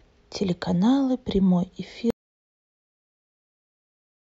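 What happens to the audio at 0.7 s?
Nothing goes wrong at 0.7 s; the speech carries on intact through that moment, with no dropout, click or distortion to be heard.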